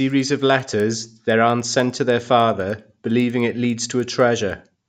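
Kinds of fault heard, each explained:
Resampler restarted on every block: each 100 ms chunk gets converted on its own, possibly 16 kHz up to 48 kHz, leaving edge errors that tick ten times a second under the speech.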